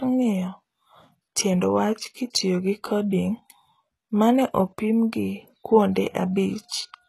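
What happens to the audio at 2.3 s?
Right at 2.30 s, just after "tiend wach", there's a pre-echo lasting about 35 ms until 2.34 s, where "gi coding" picks up. A sharp attack lands late in a codec block, and the quantisation noise spread across that whole block leaks into the quiet stretch ahead of it. So you get a brief smear of hiss before the onset, and the attack itself comes across softened rather than crisp.

That moment also carries the coarse treble heard across the whole clip, likely from HE-AAC compression at a low rate, which fits something around 16 kbps. The damage is plainly audible. Nothing reaches above 12.4 kHz, and the top end is rebuilt by copying lower bands upward under a rough envelope, so the high harmonics don't line up with the ones below. That makes s sounds gritty or lispy.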